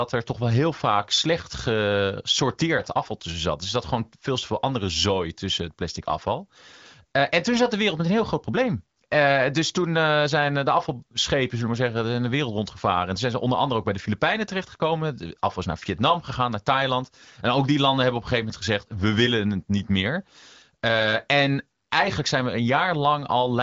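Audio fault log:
No faults heard in this clip.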